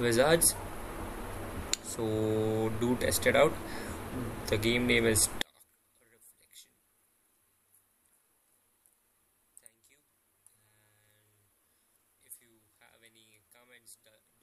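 From 5.42 s to the end of the audio, the likely cause is one stereo channel carried with its polarity reversed, a one channel inverted fault that shows once the two sides are summed to mono. Everything common to both channels then cancels, so the level falls by about 30 dB and centred content and bass all but disappear. What survives is only the difference between left and right, heard as a faint residue.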